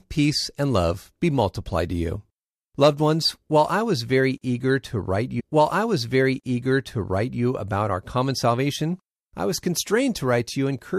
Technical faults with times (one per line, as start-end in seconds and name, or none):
5.39-7.41 stream segment repeated